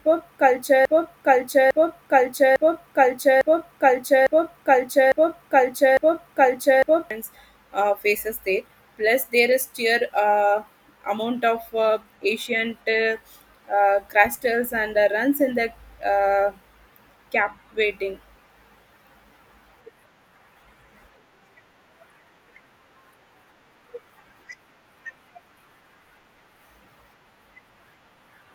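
Speech clip with a broken-record loop already running from 0 s to 7.1 s: a 0.85 s fragment repeats seven times, likely from a stalled player or stream.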